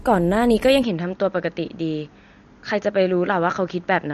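From the start, the speech carries plainly audible MP3 compression, likely from a low bitrate around 48 kbps. Nothing sounds above 13.1 kHz, and weak spectral detail flickers between frames, giving a watery, swirly texture with chirpy sibilants and smeared onsets.

At 0.83 s the input likely switched to a poorer device, and it stays that way to the end. There is no gap at the switch and no real level change, but the band now stops at 6.8 kHz, so the sound turns duller and boxier, with a new faint noise floor well below the speech.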